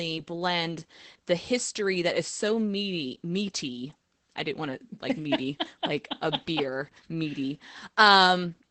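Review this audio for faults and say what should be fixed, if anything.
The whole speech clip has plain Opus voice compression. The SILK coder is spending so few bits on the excitation that the voice comes out muffled, a bit hoarse and slightly robotic, with the wideband top end cut. That sounds like roughly 12 kbps. To prevent it, bump the Opus bitrate well above that before encoding.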